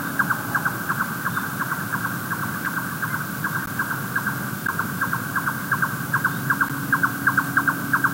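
Gaps between stream segments occur at 2.65, 3.66, 4.67 and 6.69 s, lasting 4.9, 13.8, 13.0 and 11.4 ms. The timestamps of adjacent one-second segments fail to meet, so the player pads each join with silence. Each gap is a brief, hard-edged dropout, heard as a tick or stutter, and the spacing follows the segment boundaries about a second apart. Nothing is lost; the sound is pushed slightly later.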